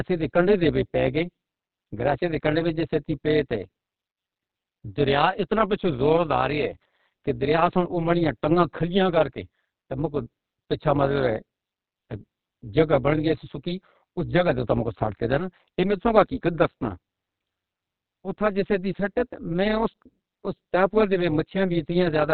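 Speech throughout, carried by heavy Opus voice compression in what sounds like its SILK narrowband mode, which fits a bitrate around 8 kbps. Nothing survives above about 4 kHz, so the speech is muffled, hoarse and slightly robotic. An overlap-add ripple is also present: frames were rejoined with an overlap that doesn't sum to constant gain, so the level swings by about 11 dB at around 200 Hz, adding a metallic buzz over the whole clip.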